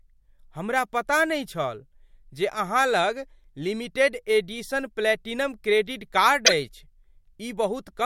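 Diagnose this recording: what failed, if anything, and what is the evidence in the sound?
A corrupt frame decoded at 6.46 to 6.50 s, after "एडिशन प्लैटिनम क्रेडिट कार्ड", causes a loud chirp or burst of noise peaking around -5 dBFS in the codec stage: a couple of damaged frames decoded with misplaced spectral energy.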